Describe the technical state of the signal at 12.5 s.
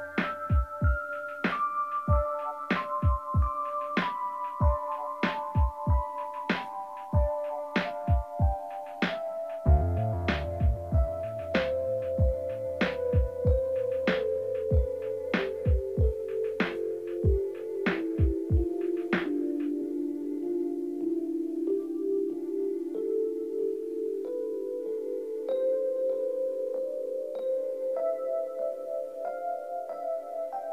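At 12.5 s, as throughout the clip, the signal was likely truncated to about 9 bits without dither: low bit depth without dither. The rounding error tracks the signal at roughly 40 dB below it, so quiet passages turn grainy.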